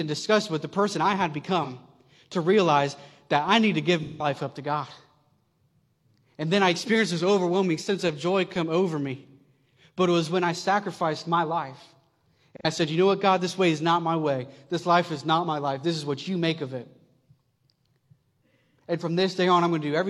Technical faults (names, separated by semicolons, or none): AAC frame loss with concealment